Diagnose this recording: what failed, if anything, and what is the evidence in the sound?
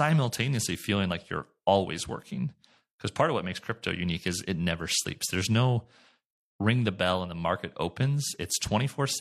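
Nothing failed here, and no stage of the chain leaves any trace in the sound. The speech holds steady, with no event at any point that would implicate the wiring, converter, buffer, processing, network or playback stages.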